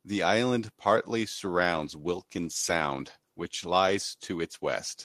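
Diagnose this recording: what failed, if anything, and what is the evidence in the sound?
Call bitrate drop, at the codec stage, from 1.56 s, just after "island partly", through the end of the clip. The speech turns coarse and watery and loses its top end, and stays degraded for at least 1.43 s. The sound suggests the encoder's target rate was cut sharply, roughly from 32 kbps to 15 kbps, forcing coarser coding and a lower bandwidth. Unlike packet loss, there are no gaps, repeats or concealment glitches, just a sustained drop in fidelity.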